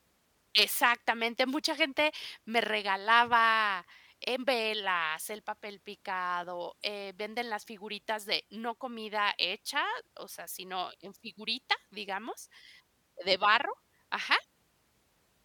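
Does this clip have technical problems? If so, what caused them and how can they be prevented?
No, this clip has no technical problems, so there is nothing to trace or prevent.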